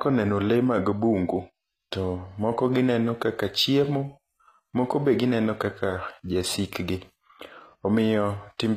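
A speech recording whose treble sounds bright yet false across its whole length: s sounds come out gritty and lispy with a metallic edge, and the top of the spectrum stops dead at about 14.9 kHz. The likely cause is HE-AAC compression at a low rate, which fits roughly 24 kbps. The codec spends its bits on the lower band and fakes the highs by copying lower content upward, so the rebuilt harmonics never quite match the real ones.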